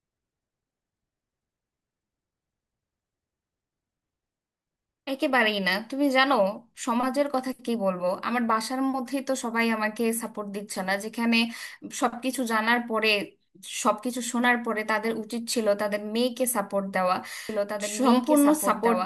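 From 17.49 s to the end, a doubled audio track appears: a second full-band copy of the speech, about 5 dB quieter and lagging about two seconds, cuts in abruptly with no decay or room colour, likely from a slower second capture path or a misaligned edit.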